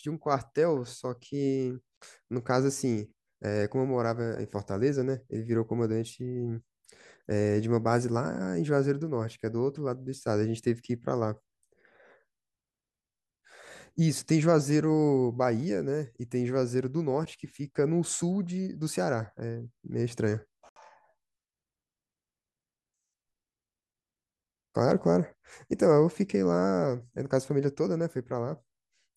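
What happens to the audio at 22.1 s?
Nothing goes wrong at 22.1 s; the speech runs on intact through that moment, with no dropout, click, glitch or other fault.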